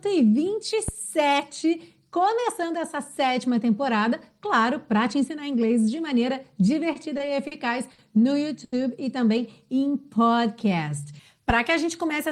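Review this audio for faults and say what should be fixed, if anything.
At 0.88 s a phantom power thump lands: a deep, low-frequency knock lasting to about 1.03 s, with its tail dying away in roughly 33 ms. A supply voltage switched on a live input sends a DC step through the coupling capacitors, and the mic preamp reproduces it as this thud. Unlike a handling bump, it has no rustle or friction texture, just a single clean pulse. Switch phantom power only with the channel muted or the fader down.

Five short stalls from a late packet follow, at 6.93, 7.17, 7.47, 7.93 and 8.64 s. Each time the jitter buffer ran dry, and the receiver held the last sound for 20, 20, 40, 50 and then 80 ms before the packet arrived. Playback then resumes exactly where it left off, with nothing lost. What separates these from dropouts is that the audio is stretched rather than cut, and the lengthening pauses show the delay building up. 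A larger jitter buffer or a steadier network path would absorb the late arrivals.

From 9.43 to 11.03 s there is a jitter buffer slow-down. To rebuild its reserve, the receiver repeated individual pitch periods and slivers of pause, adding about 143 ms, so the passage plays at 92% speed with unchanged pitch. Unlike tape-style speed drift, the pitch does not sag, and unlike the stalls, the stretching is spread smoothly across the span rather than sitting in single held moments. Setting an adequate initial buffer target would avoid the need for this catch-up.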